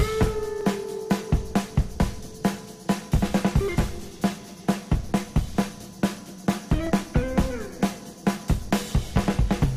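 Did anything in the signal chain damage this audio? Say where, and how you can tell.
Yes. Dropped samples at 0.61, 3.68, 5.97, 6.87 and 8.53 s, each a single sharp click. A fraction of a millisecond goes missing, so the waveform jumps to a later value. This points to the driver or buffer stage, likely from an occasional missed transfer.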